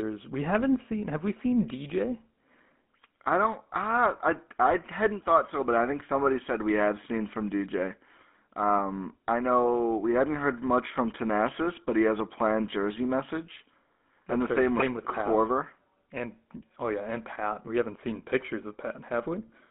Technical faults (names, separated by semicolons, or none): GSM full-rate codec; GSM bit errors